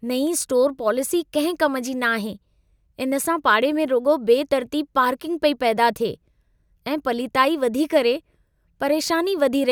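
Nothing stood out on listening to the speech recording.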